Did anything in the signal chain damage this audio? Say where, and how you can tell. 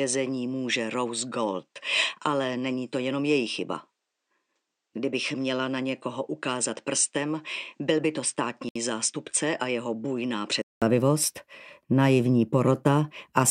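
Yes. At the input stage, the capture likely ran on a poorer device from the start until 10.82 s. Through that stretch nothing reaches above 9.3 kHz, the level sits about 5 dB lower, and a faint new noise floor appears. A 200 ms silence marks the switch back to fuller sound.

At the codec stage, separately encoded pieces were joined without trimming encoder delay and end padding. A 66 ms silence opens at 8.69 s in otherwise continuous sound, with smeared edges, and the audio then resumes exactly where it broke off.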